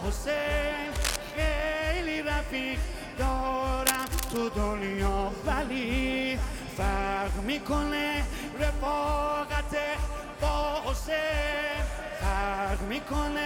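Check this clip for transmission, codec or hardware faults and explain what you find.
Two bursts of cable scratch noise sit on top of the sound, from 0.95 to 1.17 s and from 3.85 to 4.39 s. The first is a short, harsh scratch roughly as loud as the sound itself. The second is longer, a rustling crackle somewhat below it. The likely cause is a worn cable, connector or control being moved: its contact resistance fluctuates rapidly, and those fluctuations inject dense, irregular noise into the signal.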